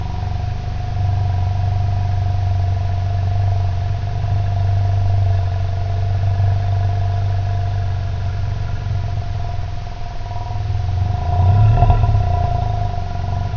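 Wrong sample rate throughout: the sound plays at two-thirds speed and about seven semitones low, consistent with 24 kHz material played back at 16 kHz without conversion.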